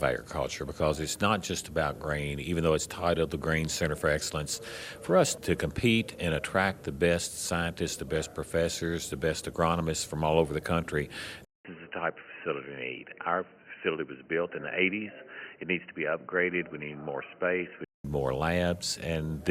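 At 11.45 s the audio cuts out for about 200 ms, then returns dull and boxy, with nothing above 3 kHz, about 5 dB quieter, and with a faint new background noise. This is likely an input switched to a poorer device, such as a headset's call profile. The gap, the level step and the different noise floor set it apart from a simple filtering or bandwidth drop. Full clarity returns at 18.05 s.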